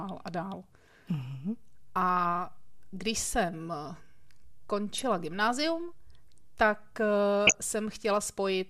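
DAB burbling at 2.19–2.30, 4.94–5.02 and 7.47–7.59 s: a few bit errors corrupt sub-band samples, giving short noisy blips over the speech rather than dropout silence.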